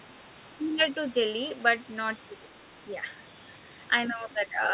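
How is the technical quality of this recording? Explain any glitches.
The recording has two brief glitches, both speech suppressed in double talk, heard as short dips at 0.75 to 0.81 s and 4.49 to 4.57 s. Each time the level sags by roughly 5 dB for well under a tenth of a second. That's likely an echo canceller failing to separate its own talker from the far-end sound on the loudspeaker and pulling the whole signal down until the overlap clears. The call path runs through G.711 mu-law at 64 kbps, so nothing reaches above 4 kHz.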